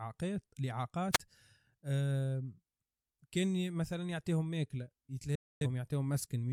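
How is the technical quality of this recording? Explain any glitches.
The recording has two glitches.

At 1.12 to 1.19 s there is a wireless microphone squelch dropout. The radio signal fades, and the receiver's squelch closes. You hear hiss rise, then about 26 ms of near silence before the speech returns.

At 5.35 to 5.67 s there is a digital broadcast dropout. The receiver lost valid frames and muted. The sound fades out within 3 ms, leaving a 256 ms gap, which fits about six lost frames. Whatever was said then is gone.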